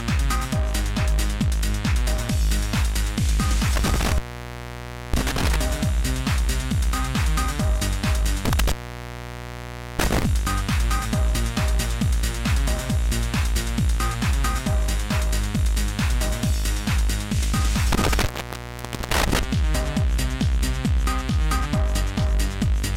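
Intermittent contact breaks the signal three times: 3.76–5.56 s (open for 0.96 s), 8.45–10.25 s (1.27 s) and 17.92–19.43 s (0.85 s). A loose plug or cable loses its connection, so the sound drops out abruptly with crackle at each edge, leaving faint hiss. On a waveform, each gap collapses to a near-flat line bracketed by sharp spikes. A spectrogram shows vertical broadband streaks at the edges around a dark, empty band.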